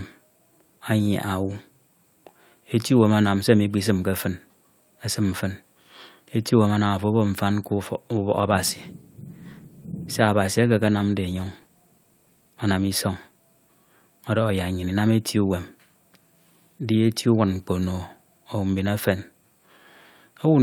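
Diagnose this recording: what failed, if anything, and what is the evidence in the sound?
A call bitrate drop forced the encoder to code coarsely: from 8.31 to 15.31 s the speech turns rough and muffled, consistent with roughly 64 falling to 23 kbps.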